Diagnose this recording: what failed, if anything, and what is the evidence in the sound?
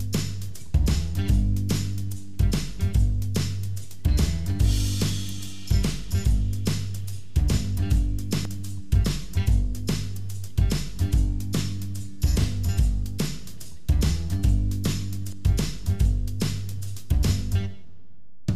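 The fault sits at the driver or buffer stage. There are three abrupt jumps, at 0.74 s, 8.45 s and 15.33 s. Each is a jump with the sound skipping forward, and no gap of silence. Roughly a tenth of a second seems to vanish each time. The likely cause is a dropped buffer (overrun). The capture software fell behind, the hardware overwrote unread samples, and the audio on either side was spliced directly together.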